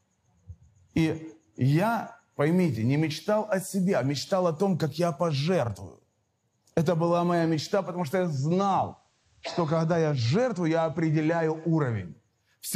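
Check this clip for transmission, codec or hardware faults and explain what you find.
One transmission fault: a digital radio blending to analogue between 8.14 and 12.21 s. Over about a quarter of a second the sound drops about 1 dB in level, and picks up a faint hiss well below the signal. The hybrid receiver lost its digital stream and cross-faded to the same station's FM broadcast, whose narrower bandwidth and noise floor replace the cleaner digital audio until it blends back.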